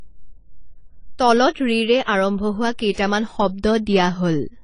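Throughout the speech, nothing is heard above 10 kHz, and the remaining band sounds dull and smeared, with a watery, fizzy texture on sibilants and sustained sounds. This points to AAC compression, likely AAC-LC at a low bitrate around 24 kbps, where coarse quantisation and a lowered cut-off strip detail.

Pre-echo appears at 2.03 to 2.08 s, just before "আৰম্ভ হোৱা", and again at 2.92 to 2.97 s, just after it. A hiss of about 45 ms and 56 ms precedes each attack, because the codec spreads quantisation noise across the quiet start of the block, softening the onset.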